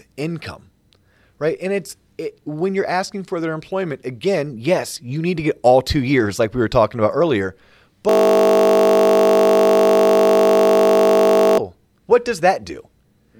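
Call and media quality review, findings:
System hang loop, 8.09 to 11.58 s, after "were talking about earlier", before "what does". Steady 50 Hz buzz: one 20 ms slice replayed identically, fitting a frozen driver and a 20 ms ring buffer. Unlike jitter stutter, repetition is exact and strictly periodic.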